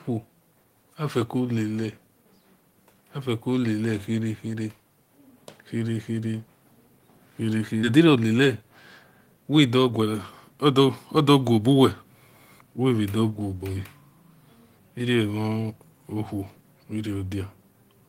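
At 7.83 to 7.85 s the speech skips ahead: about a second of audio never plays, and the receiver jumps straight to later material that was already queued, with no filler in between. The two sides are spliced almost directly, so one sound is cut off and the next begins abruptly. On a waveform the envelope changes shape in a single step. On a spectrogram the harmonic tracks break and resume abruptly, with no silent gap between them.

From 7.93 to 12.04 s a jitter buffer speed-up follows. The buffer still held more audio than its target, so the receiver repeatedly trimmed out pieces one or a few pitch periods long, dropping roughly half a second in total. Playback runs at 111% of normal speed with the pitch unchanged, so the speech sounds hurried. On a spectrogram the harmonics keep their spacing while syllables and pauses are compressed in time. The waveform shows shortened segments with many small splice points.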